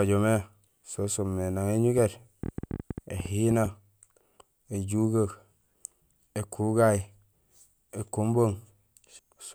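From 1.98 to 3.66 s a train of clicks, about nine per second, unevenly spaced and well above the speech, likely from interference. Their sameness distinguishes them from random crackle.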